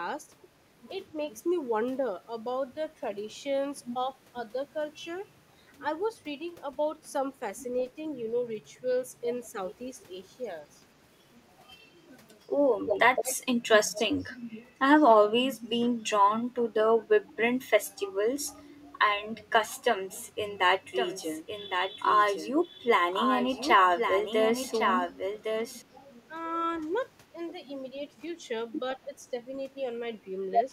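From 12.79 to 13.37 s and 13.63 to 14.0 s an echo leak repeats the speech 164 ms late, first fairly loud, then much fainter, likely from an echo canceller letting loudspeaker pickup through. From 20.96 to 25.82 s a doubled audio track runs a full-band copy about a second behind and a few dB quieter, likely a second capture path, with abrupt edges. At 25.59, 26.28, 27.34 and 29.06 s the speech is suppressed in double talk, dipping by up to about 10 dB for a few tens of milliseconds, likely as the canceller ducks both talkers.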